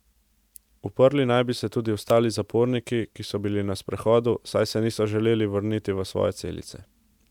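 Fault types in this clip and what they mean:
No fault types are present in this clip.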